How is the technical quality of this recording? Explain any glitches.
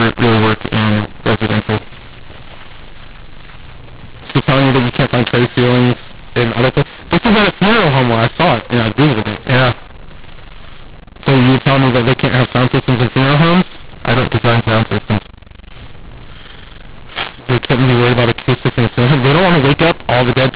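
Technical quality is poor: the whole speech recording is distorted by a single decoding fault, heard within telephone-band audio that stops at 4 kHz.

A mu-law and A-law mix-up runs from start to finish. The speech was coded with the mu-law variant of G.711 but decoded as if it were A-law. Because the two logarithmic scales assign different levels to the same 8-bit codes, sample values come back scrambled: some too loud, some too quiet, and the faintest lifted well above silence. The speech sounds harsh and gritty, and pauses fill with noise.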